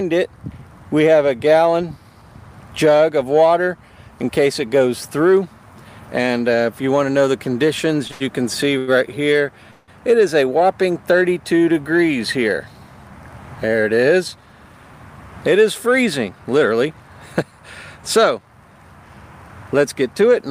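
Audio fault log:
8.07 to 8.89 s, short stall from a late packet: three holds, at 8.07 s (17 ms), 8.11 s (91 ms) and 8.78 s (92 ms). Each time a packet arrived late, the jitter buffer emptied and the last sound was stretched until it came, then playback resumed where it left off, so the held sound carries a slight buzz or dip but nothing is lost.
9.71 to 9.90 s, call audio freeze: the sound stops moving for 170 ms and the last moment is continued as a fading buzz or hiss rather than falling silent. The likely cause is packets held up in transit draining the jitter buffer; playback then resumes from the same point, adding a gap with nothing missing.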